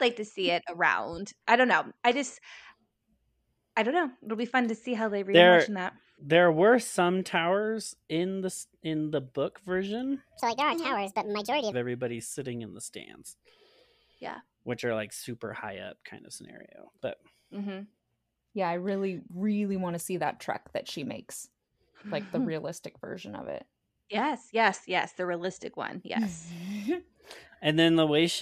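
A section at the wrong speed, 10.40 to 11.72 s in this speech clip, follows "in the book version": it plays about 1.63 times too fast, raising pitch roughly ten semitones, likely from resampling to a mismatched clock.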